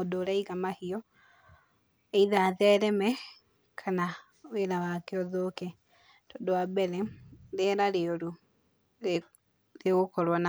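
No technical faults detected.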